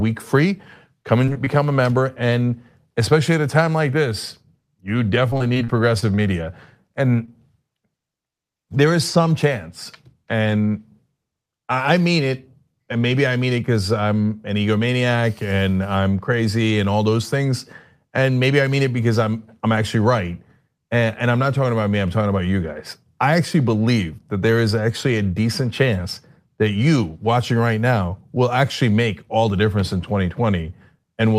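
Short concealed packet loss occurs three times in quick succession near the start, at 1.25–1.29 s, 1.33–1.37 s and 1.45–1.48 s, each time losing about 20 ms of the speech stream. The receiver covered each hole by extending the preceding sound for roughly 15 to 21 ms, then crossfading back into the real signal. The result is a cluster of small smears or wobbles rather than clean transitions.

Repeated packet loss, heard as robotic sound, runs from 5.30 to 6.20 s. Across that stretch the speech is broken by a string of dropouts, the longest about 35 ms. Each is patched by continuing the last sound before the next one arrives, so roughly 15% of the span is synthetic fill. The speech turns choppy and mechanical, with pieces missing.

A final short concealed packet loss at 7.26–7.30 s again drops about 20 ms and leaves a brief smear.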